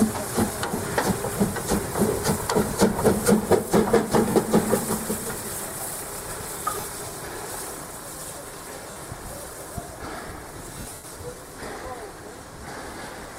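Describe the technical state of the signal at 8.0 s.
At 8.0 s the signal is intact, with nothing faulty to point to at that moment.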